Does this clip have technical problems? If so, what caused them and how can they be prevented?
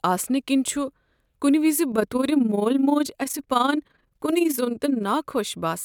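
Yes. Overlap-add ripple runs from 1.92 to 5.05 s, starting after "کُنہ وز". The frames were rejoined with overlapping windows that don't sum evenly, so the level pumps by about 11 dB around 20 times a second, heard as a fast flutter. To prevent it, use a window shape and hop size that satisfy constant overlap-add, such as a Hann window at 50% overlap.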